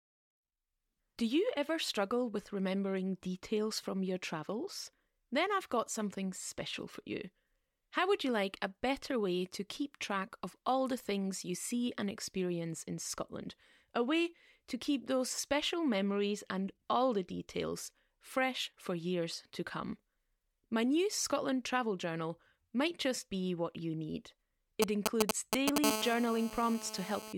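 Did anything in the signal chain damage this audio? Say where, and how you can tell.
Yes. GSM signalling bursts hit the analogue wiring from 24.8 to 25.8 s. Galloping ticks and short 217 Hz buzzes, louder than the speech, are radio pulses rectified by the circuit.

GSM phone buzz follows from 25.8 to 27.3 s. A steady, raspy 217 Hz buzz about 5 dB under the speech means a call's transmissions are being rectified in the analogue path.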